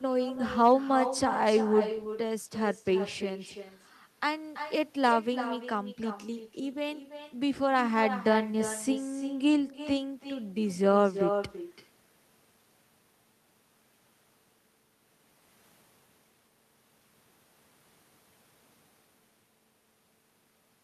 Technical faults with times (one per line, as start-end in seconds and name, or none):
0.00-20.83 echo with no canceller